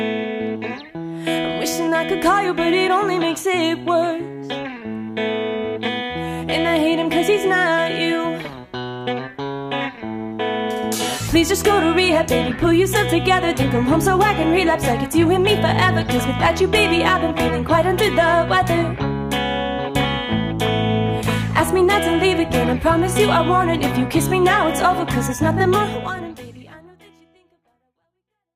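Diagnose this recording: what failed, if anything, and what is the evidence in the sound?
Nothing here points to a failure at any stage, and the only thing of note is a smooth, editor-style fade-out that begins around 25.5 s and eases the level down to the end.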